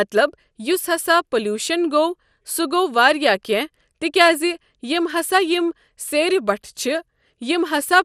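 From start to finish the speech sounds dull and plainly gurgling, with a granular roughness and a watery flicker in the upper range, most likely MP2 compression. Layer II coding has run short of bits, so upper sub-bands drop in and out while the remaining ones are coarsely quantised; the damage fits a rate near 80 kbps. A spectrogram shows nothing above 15.1 kHz and blocky, patchy energy bands flickering beneath that ceiling.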